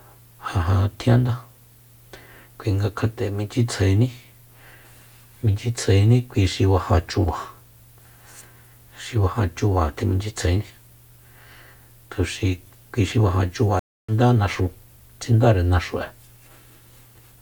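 The connection drops at 13.79 s and a stream reconnect restarts the decoder: 290 ms of silence, then speech resumes roughly 0.3 s further along.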